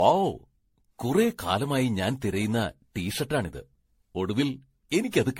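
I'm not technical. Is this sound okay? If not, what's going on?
No. The whole clip has generation loss. The speech sounds swirly, hollow and smeared. It was likely saved as MP3 again and again, about fifteen times.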